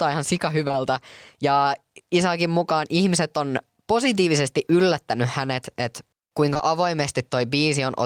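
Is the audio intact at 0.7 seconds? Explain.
No. Short concealed packet loss runs from 0.67 to 0.75 s: two adjacent 20 ms gaps, at 0.67–0.71 and 0.71–0.75 s, were filled by extending the preceding speech. It heard as a brief smear.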